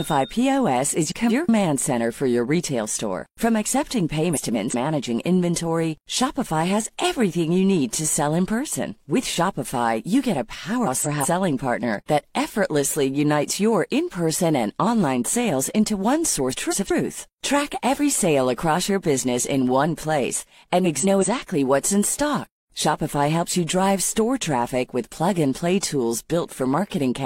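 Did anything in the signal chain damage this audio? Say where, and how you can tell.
Yes. Frames out of order, at the network or packetising stage, at 1.09–1.49 s, 4.33–4.75 s, 10.86–11.27 s (just before "partner that effortlessly"), 16.51–16.92 s (after "online sales into one") and 20.84–21.25 s. Each stretch plays as a garbled flutter, two roughly 186 ms blocks swapped, which fits runs of about four codec frames delivered in reverse. Unlike packet loss, nothing goes silent or repeats, and no time is lost.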